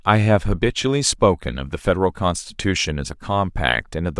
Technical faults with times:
none

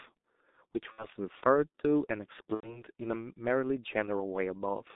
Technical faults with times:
0.00-4.96 G.723.1 codec
0.92-1.07 VoIP packet loss concealed by the speech codec
2.54-2.82 VoIP packet loss concealed by the speech codec

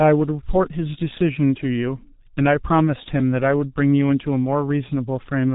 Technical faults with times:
0.00-5.55 G.723.1 codec

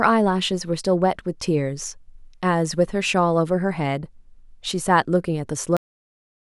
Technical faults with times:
5.77-6.50 cut-off end

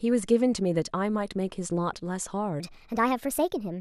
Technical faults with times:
2.60-3.81 section at the wrong speed

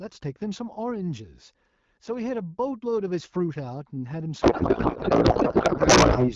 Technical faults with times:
4.41-6.34 codec payload misread

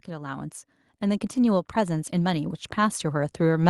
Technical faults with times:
0.06-3.70 automatic gain rising

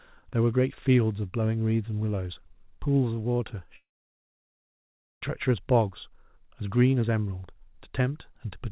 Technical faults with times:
3.76-5.23 long network dropout

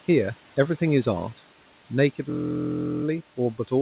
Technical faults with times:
0.00-3.82 noise suppressor artifacts
2.30-3.04 system hang loop

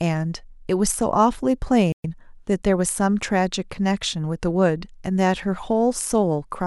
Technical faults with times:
1.92-2.04 playback stall
2.04-2.16 time-compressed catch-up

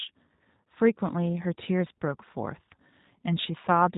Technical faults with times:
0.00-3.97 G.729 codec

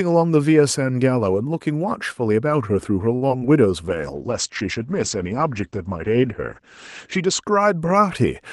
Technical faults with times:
3.15-3.24 short stall from a late packet
3.28-3.43 short concealed packet loss
3.89-7.49 call bitrate drop

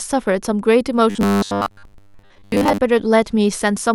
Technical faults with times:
1.10-2.78 robotic sound from repeated short buffers

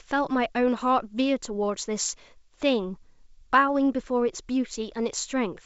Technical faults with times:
none

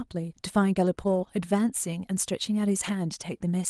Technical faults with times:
1.07-1.29 lost packet rebuilt from error correction
2.83-2.89 lost packet rebuilt from error correction

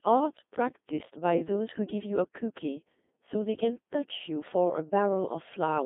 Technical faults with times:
0.00-5.86 Codec 2 vocoder

